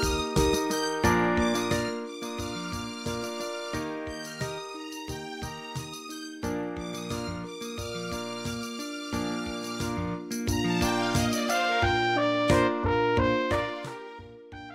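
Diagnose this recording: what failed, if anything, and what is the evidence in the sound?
Zipper noise from 13.38 to 14.07 s, where a fade of roughly 20 dB is applied in unsmoothed 1 dB steps about twenty times a second, likely as per-buffer gain in the driver or buffer stage. Each step clicks. On a waveform the envelope descends as a staircase, and a spectrogram shows evenly spaced broadband vertical lines.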